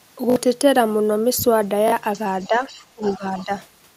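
A short stutter at 0.30 to 0.36 s has a hard join between each pass. This is a repeated buffer: fresh audio arrived late, so a 20 ms piece played three extra times, losing something like 70 ms of sound. It recurs at 1.88 to 1.92 s with two extra plays.

From 2.13 to 2.23 s and again from 2.39 to 2.85 s, a faint second voice sits about 25 dB under the main speech. This is likely the other side's voice leaking through, where loudspeaker sound the echo canceller failed to remove reached the microphone.

Inside that stretch, 2.47 to 2.64 s, the main speech dips by a few dB. A deeper drop of about 15 dB runs from 2.95 to 3.52 s, affecting roughly 400 ms. This is likely speech suppressed in double talk, where the canceller turned down both voices while both sides spoke. The leaking voice returns inside that dip at 3.02 to 3.19 s and 3.37 to 3.44 s, again about 25 dB down.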